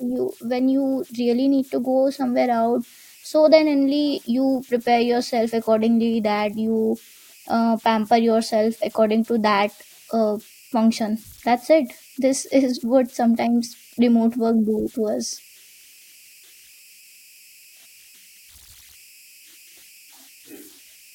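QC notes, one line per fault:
throughout, converter idle tones: whistle around 3 kHz, about 30 dB below the speech; undithered delta-sigma bit patterns loop on small inputs, unlike hum, surfacing in pauses.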